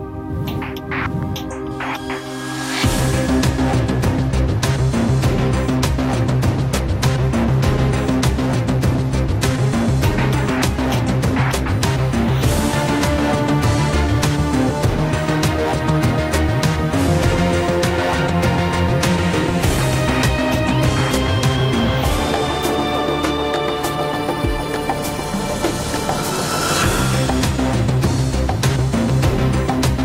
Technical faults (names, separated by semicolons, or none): USB whine